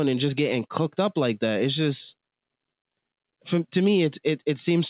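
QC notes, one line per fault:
No faults found; the speech has passed through a G.711 mu-law call path at 64 kbps, with nothing above 4 kHz, as expected for that codec.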